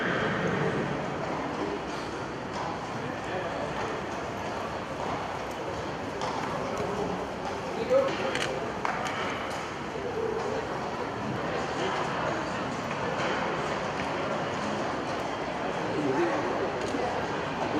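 No technical faults can be heard anywhere in this clip.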